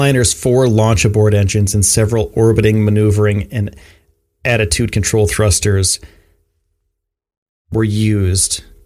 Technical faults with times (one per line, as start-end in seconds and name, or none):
2.39-2.68 hard clipping
4.46-4.73 hard clipping